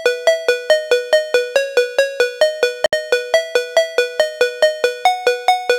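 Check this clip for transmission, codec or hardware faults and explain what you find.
One fault is present: a gap at a join of encoded pieces, from 2.86 s to 2.93 s. The sound drops out for about 68 ms, with edges that are blurred rather than clean. The audio was encoded in separate segments and concatenated without trimming, so the encoder's start-up delay and the padded final frame of the preceding piece both remain as silence. After the gap, the sound resumes exactly where it left off.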